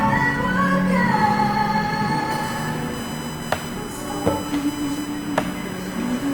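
Opus compression runs through the whole recording of everyday sounds: tonal parts come out rough, grainy and noisy rather than swirling, and the spectrum stays full up to about 20 kHz with few holes. That points to Opus likely running in its CELT music mode at a low rate, around 24 kbps, where the encoder preserves each band's energy but fills starved bands with folded lower-band content or noise. USB whine then appears from 2.31 s to the end at 6.34 s, a steady tone based on 1 kHz with its strongest component at the third harmonic, 3 kHz, sitting roughly 15 dB below the sound. Its fixed pitch matches the bus's 1 ms frame rate: current drawn in those frames leaks into the audio path through shared power or ground.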